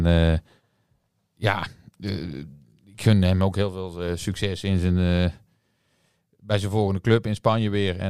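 No technical faults can be heard.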